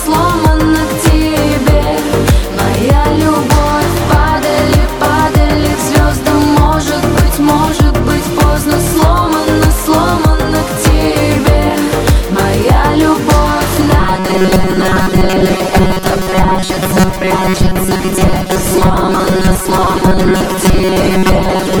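From 14.00 s to the end of the clip, the sound turns into a rigid, metallic buzz pitched at 188 Hz. It still loosely follows the shape of the original audio but has lost its natural movement. This is robotic sound from repeated short buffers, likely caused by new audio arriving too slowly. The gap is filled by looping a fragment of about 5.3 ms, one cycle of the buzz. Most of the real audio in that stretch is skipped.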